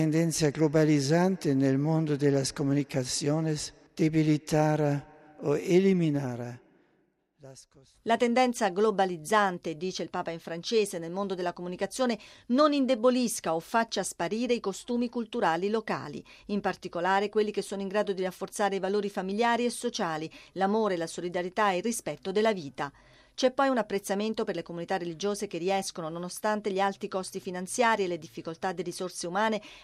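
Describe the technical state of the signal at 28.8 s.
At 28.8 s the signal is intact, with no fault present at that moment.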